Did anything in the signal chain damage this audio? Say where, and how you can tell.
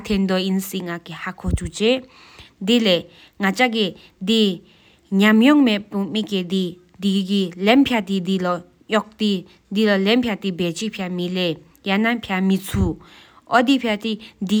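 No, nothing along the chain seems to have harmed this speech recording, since there's no damage to point to at any stage.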